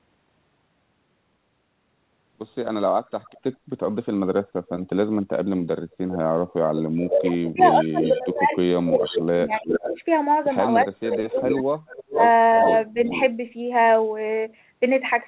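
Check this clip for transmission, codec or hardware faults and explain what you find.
Two faults are present: echo leak in three places, and speech suppressed in double talk twice. The audio tops out at 4 kHz, which fits a narrowband call codec.

Echo leak occurs at 3.23 to 3.4 s, 6.11 to 9.93 s and 11.04 to 13.23 s. A delayed copy of the speech trails the original by 379, 404 and 426 ms. The first is faint, about 35 dB down. The others sit about 10 dB down. Likely a loudspeaker echo the far end's canceller missed.

Speech suppressed in double talk occurs from 7.06 to 9.99 s and from 11.06 to 13.13 s, overlapping the echo. The speech dips in pieces, by about 25 dB at worst, and then by about 20 dB. The dips total about two seconds, then well under one. Likely the canceller confused the talker with echo and attenuated both.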